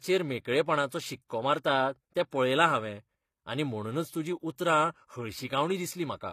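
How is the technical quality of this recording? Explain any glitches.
Technical quality is compromised by codec damage across the whole recording and two brief pre-echo glitches.

HE-AAC compression: The speech was likely squeezed through HE-AAC at a low bitrate, fitting roughly 24 kbps. The codec keeps only the lower spectrum and synthesises the treble by copying lower bands upward, and nothing survives above 15 kHz. The resulting highs sound artificial, and sibilants come out gritty and metallic.

Pre-echo: At 1.28 to 1.30 s and again at 2.30 to 2.32 s, just before "पळयलां हांवें आनी म्हणूनच", sharp onsets landed late in a transform block. The codec spread quantisation noise evenly across that block, pushing about 21 ms of hiss ahead of each attack and softening it.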